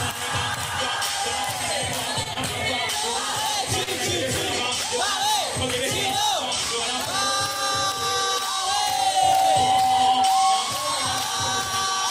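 At 2.23, 2.33 and 3.83 s the sound briefly hangs and stretches for 20 to 32 ms: short stalls from a late packet, where an empty jitter buffer was filled until delivery resumed. From 8.19 to 10.80 s a steady 765 Hz tone swells over about a second to a few dB above the sound: loudspeaker feedback squeal, the microphone re-amplifying its own loudspeaker.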